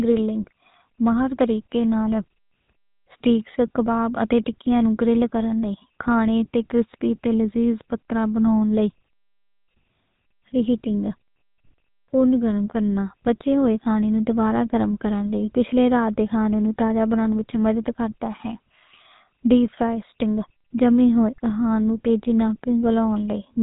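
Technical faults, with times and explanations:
Throughout, GSM full-rate codec: the speech has a plainly audible buzzy, gravelly roughness and nothing above about 3.8 kHz, which fits the old 13 kbps GSM full-rate coder rebuilding the voice from a vocal-tract model fed by sparse, regularly spaced pulses.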